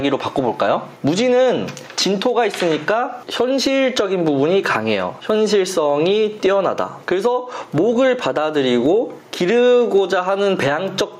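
Gain pumping runs throughout the clip: the gain swings by roughly 10 dB under every loud sound, leaving loud and soft parts squashed together. The likely cause is gain set far too high, with a fast limiter clamping each peak.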